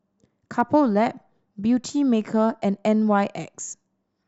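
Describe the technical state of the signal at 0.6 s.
Hard clipping runs from 0.60 to 0.76 s. The speech peaks exceed what the signal path can carry by about 1 dB and are sliced flat, giving a brief crackle. The waveform shows squared-off tops, and the spectrogram shows faint energy streaking up toward high frequencies.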